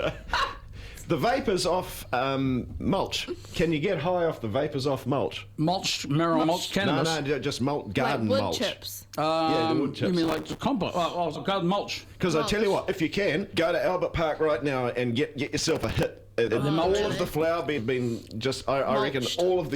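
At 6.43 s the first compressed frames skipped event occurs: the audio jumps forward by roughly a fifth of a second, which points to about ten 20 ms frames that were missing or rejected by the decoder. On a waveform the envelope steps abruptly to new material, and a spectrogram shows a vertical seam where the spectrum breaks off and resumes at different positions.

From 10.24 to 10.59 s a processor overload crackle rides on the sound. The processor repeatedly missed its buffer deadlines, and each miss replayed a sliver of old audio whose hard edges, spaced at intervals that fit buffers of roughly 3 ms, pile up into gritty tearing. A spectrogram shows a dense comb of thin vertical broadband lines across the span, and the waveform looks jagged with small repeated segments.

Further frame skips follow at 11.35–11.40 s and 13.53–13.56 s, each dropping roughly a tenth of a second. A second crackle burst runs from 15.47 to 16.03 s, considerably sparser than the first. 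The remaining skips come at 16.47–16.51 s, about a tenth of a second, and 17.77–17.80 s, about a fifth of a second.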